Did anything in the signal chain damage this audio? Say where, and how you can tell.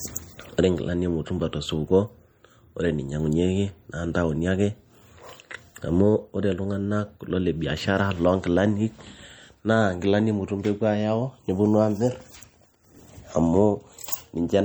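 Yes. The speech sounds watery and swirly throughout, with plainly audible codec damage. At the codec stage, this is likely MP3 compression at a low bitrate near 48 kbps, zeroing weak frequency lines.

From 12.10 s to the end, a steady tick about ten times a second sits roughly 45 dB below the speech. This is Wi-Fi interference: 102.4 ms beacons rectified in the analogue wiring.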